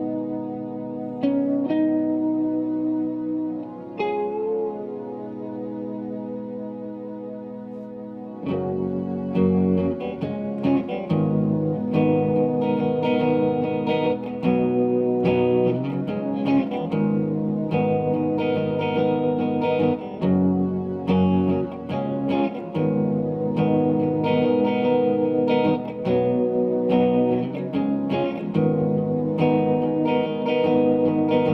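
No technical faults can be heard anywhere in the audio.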